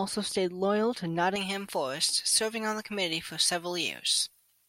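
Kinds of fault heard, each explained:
Pre-emphasis left on: A treble boost applied for recording or transmission was never undone by the matching de-emphasis, so the high frequencies stay lifted. From 1.36 s, just after "stayed loyal to", to the end of the clip, the speech turns thin, bright and sibilant, with the top end standing about 11 dB above the 1 kHz region at 10 kHz. That shape fits a J.17 curve left uncorrected.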